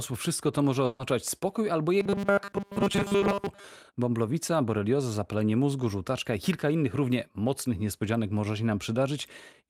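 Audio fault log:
0.85–1.01 s, burst of packet loss: After "wszystko to może", about 140 ms of the sound is lost and replaced by a continuation of the last sound that fades as the gap goes on, before resuming at "spokój albo". A spectrogram shows the last sound smeared and fading into the gap, with no silent stretch.
2.0–3.65 s, robotic sound from repeated short buffers: After "spokój albo", the speech becomes a rigid, metallic buzz at 200 Hz, likely from a 5 ms piece being replayed while new audio arrives too seldom, so most of the real signal is skipped. The spectrogram shows evenly spaced horizontal lines at 200 Hz and its multiples, and the waveform shows short repeating cycles.
3.19–3.23 s, short concealed packet loss: Inside the robotic stretch, about 20 ms never arrived in time and was filled by continuing the preceding sound, then blended back. It is heard as a brief smear or wobble. 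The waveform shows a small splice seam, and the spectrogram shows a thin, blurred vertical slice.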